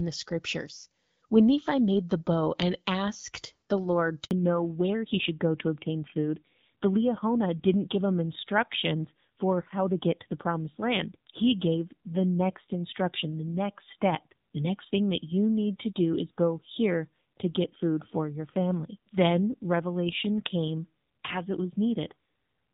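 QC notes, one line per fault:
4.25–4.31 s, handover gap: sound cuts out for about 60 ms while the call hops networks, since no frames arrived during the switch, so that bit's just gone.
4.31 s to the end, fallback to narrowband: everything above 4 kHz disappears and the sound turns duller and rougher, which fits a drop from HD Voice at 12.65 kbit/s to AMR-NB at 7.4 kbit/s.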